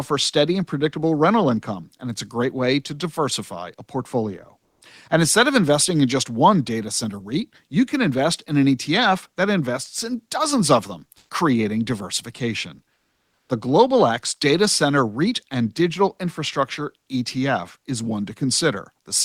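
Comfort noise in place of the background at 4.59–4.81, 11.17–11.29 and 12.93–13.49 s, likely from discontinuous transmission: the pauses hold flat, featureless hiss that steps by about 8, 4 and 10 dB and shows as smooth, uniform spectrogram patches.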